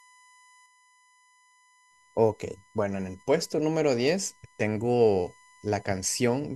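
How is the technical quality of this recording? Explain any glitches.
The recording has one steady problem: a USB whine running the whole way through the speech. It's a fixed 1 kHz tone sitting around 30 dB below the voice, caused by the USB bus pulling current in 1 ms frames and leaking that rhythm into the audio through shared power or ground.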